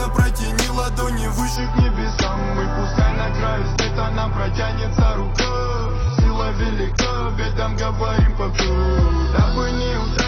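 At 1.56 s, with no gap, the audio switches to an adaptive stream at a lower bitrate and stays there to the end. Nothing survives above 6.6 kHz and codec artefacts thicken. A spectrogram shows the top band sheared off at a flat edge.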